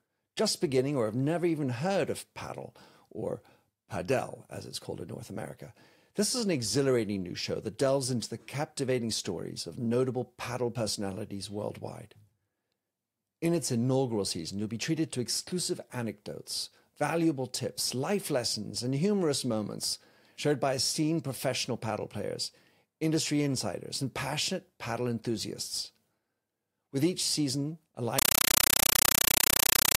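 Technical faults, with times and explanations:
28.19–29.98 s, compressed stream played as audio: after "with each season" the speech is replaced by very loud static pulsing 31.25 times a second, each 8 ms noise burst followed by silent zero padding. This fits an undecoded AC-3 stream at 384 kbps. Steady hiss would not pulse like this.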